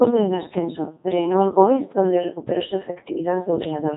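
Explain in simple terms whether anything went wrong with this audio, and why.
The speech went through a Codec 2 vocoder, a very low-rate voice coder made for digital radio. Instead of keeping the actual sound wave, it sends only a rough description (pitch, loudness, whether the sound is voiced, and the general shape of the tone), and the receiver rebuilds a voice from simple tones. Here that damage is heavy and lasts the whole clip, about 4 seconds, so the speech sounds robotic and buzzy, with nothing above 3.8 kHz.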